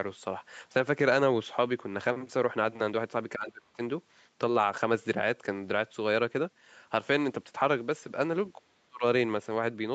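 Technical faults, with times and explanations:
3.35–3.79 s and 8.55–9.04 s, speech suppressed in double talk: the speech sinks by around 30 dB, then around 35 dB, for roughly 0.4 s, then 0.5 s. This is likely an echo canceller mistaking it for loudspeaker echo. The waveform shows collapsed envelopes, and the spectrogram shows near-empty vertical gaps.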